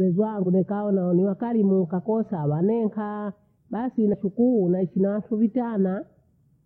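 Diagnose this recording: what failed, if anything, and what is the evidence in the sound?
Damaged data in a compressed stream at 0.42 to 0.47 s, just before "dekae naole wakarimu ukakosa", and 4.09 to 4.14 s: corrupt codec frames make the decoder lose sync, producing brief glitches.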